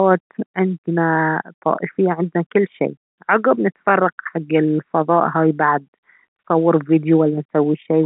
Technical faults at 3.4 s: none

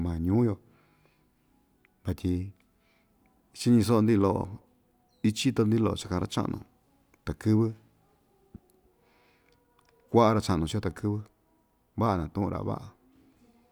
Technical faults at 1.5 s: none

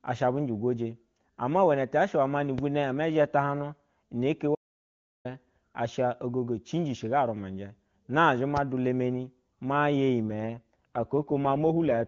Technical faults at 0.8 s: none

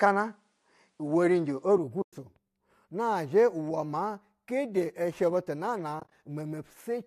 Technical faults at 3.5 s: none

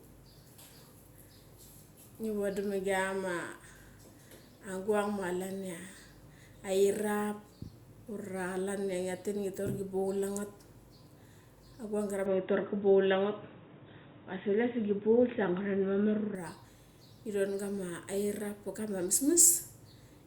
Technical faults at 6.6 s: none

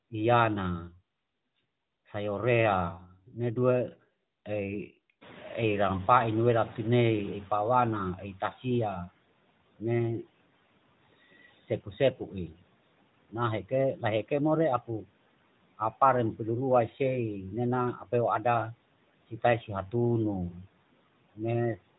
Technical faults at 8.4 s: noise suppressor catching up; speech cut by the noise suppressor

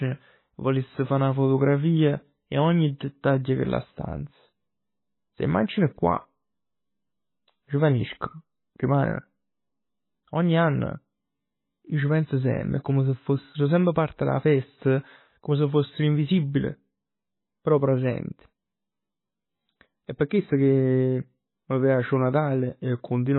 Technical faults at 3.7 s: MP3 compression

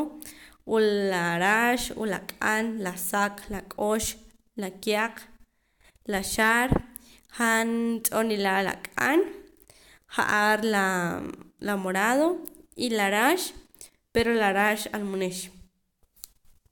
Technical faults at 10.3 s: none

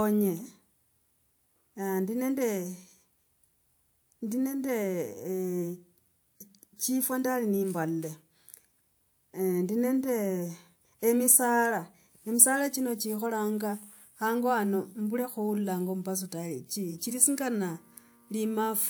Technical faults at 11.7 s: none

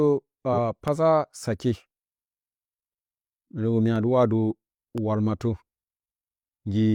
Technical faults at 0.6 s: corrupt frame decoded

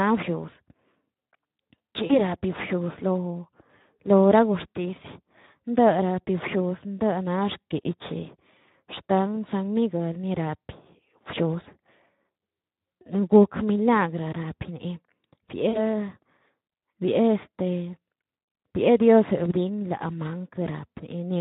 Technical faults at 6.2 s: Speex codec

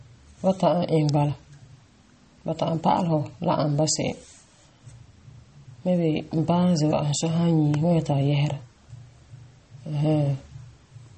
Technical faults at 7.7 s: MP3 compression; electrical switching spike

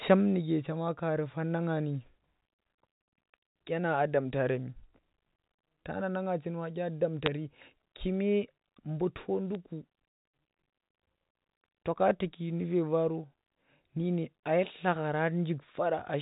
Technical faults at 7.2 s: bit errors on a digital phone line

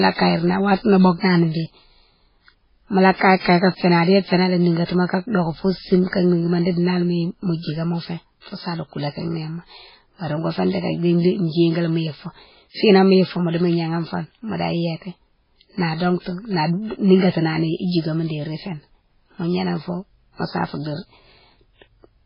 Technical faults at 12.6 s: MP3 compression

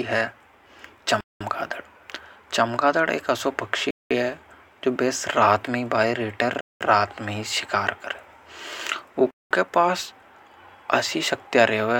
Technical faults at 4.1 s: gap between chunks

